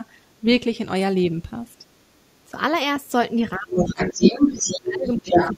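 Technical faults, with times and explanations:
0.00–0.04 s, 0.43–0.73 s, 1.24–1.75 s, 2.46–2.57 s and 3.01 s to the end: speech suppressed in double talk. The talker's level sags while the far end is also active. The dips are shallow at first, about 5 dB, then about 10 dB, and reach about 20 dB in the final stretch, where roughly one and a half seconds is held down. The likely cause is an echo canceller that cannot tell local speech from loudspeaker echo and ducks both.
0.30–0.39 s, 1.66–2.36 s and 3.72–5.55 s: other side's voice leaking through. A second voice bleeds into the microphone path. In the first two spans it is faint, about 40 dB under the talker, a low background trace. From 3.72 s it rises to about 5 dB above the talker and dominates the sound while the local speech is being pushed down. This likely comes from echo cancellation leaving loudspeaker pickup unremoved.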